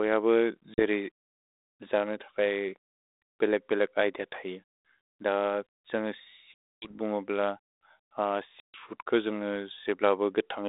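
Packet loss on an ADPCM call hits this 32 kbit/s-style narrowband speech at 0.74 s (40 ms gone), 6.54 s (280 ms, many packets) and 8.6 s (140 ms). Each hole is hard-edged silence. The decoder's predictor then mismatches the sender's, so speech returns with brief, slight distortion.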